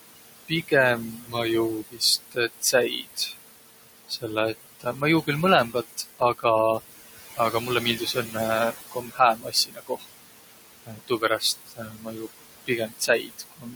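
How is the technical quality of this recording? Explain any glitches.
The recording is marred by heavy noise reduction. The room noise, sitting about 11 dB below the speech, is pumped down by about 19 dB between phrases.

Noise suppressor artifacts run throughout. The suppressor lowers bands it judges to be steady noise, frame by frame. This differs from a gate, which mutes everything at once.

Speech cut by the noise suppressor appears from 0.48 to 3.36 s, 4.09 to 6.44 s, 7.35 to 10.16 s and 10.86 to 13.75 s. Soft sounds taken for noise drop by about 18 to 19 dB, so they sound swallowed. This adds up to roughly a second and a half in the last stretch and less earlier.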